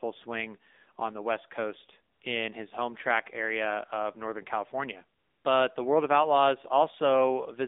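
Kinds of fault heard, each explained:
AMR narrowband mobile codec: The speech has been through a narrowband mobile speech codec that samples at 8 kHz and rebuilds the voice from a vocal-tract model excited by a handful of pulses per subframe. Here the passband runs only from about 250 Hz to 3.7 kHz, so the voice sounds thin and boxy, and the plainly audible buzzy, synthetic texture fits one of the lower AMR-NB modes, around 7.4 kbps.
AMR comfort noise: During two pauses the sender stopped transmitting speech frames, and the receiver filled each gap with generated noise built from a rough estimate of the background's level and spectrum. The real background briefly gives way to a smooth, steady hiss that switches in and out, first for about 80 ms at 2.14 to 2.22 s, then for about 240 ms at 5.20 to 5.44 s.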